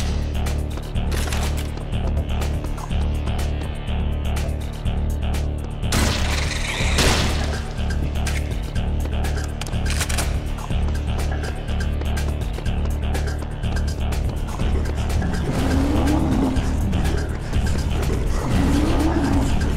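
Nothing here calls for comment, since no technical faults turn up anywhere in the audio.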